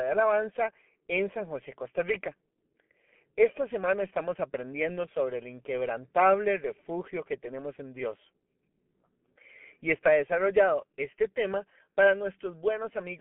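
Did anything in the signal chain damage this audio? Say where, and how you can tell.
Yes. G.723.1 codec damage runs throughout. The speech is muffled and hoarse, with nothing above 3.7 kHz and smeared consonants, which fits heavy coding at around 6 kbit/s.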